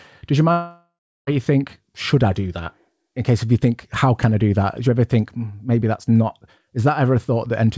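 Speech, sent over a call link whose sound stops at 8 kHz, which fits a G.722 codec. From 0.52 to 1.29 s the audio breaks off. The last sound is stretched into a fading buzz. About 0.35 s of silence follows. This is likely a long network dropout. Roughly 0.76 s of audio never arrives, and the speech resumes past the lost part.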